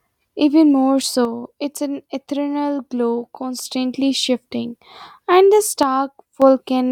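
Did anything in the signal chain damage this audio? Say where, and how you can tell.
Yes: one channel drops out, likely through a flaky analogue connection. From 1.25 to 3.65 s, ending just before "shifting and the", and again from 5.83 to 6.42 s right after those words, the level abruptly falls about 6 dB. That's what a mono sum loses when one side vanishes.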